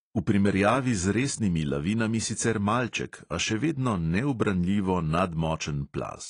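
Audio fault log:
throughout: AAC compression, likely at a low bitrate near 32 kbps. The speech stops dead above 10.2 kHz, and its sibilants smear and warble, unlike a clean low-pass filter.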